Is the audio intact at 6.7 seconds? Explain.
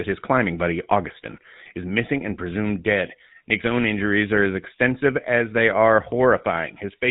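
No, at 6.7 s the speech is still under the GSM full-rate codec, heard across the whole clip. Its pulse-driven vocal-tract model, likely running at 13 kbps, cuts everything above 4 kHz and leaves a buzzy, gravelly roughness.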